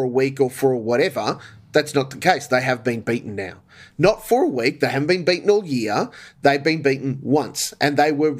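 No technical faults can be heard anywhere in the speech recording, and the signal stays steady and continuous throughout.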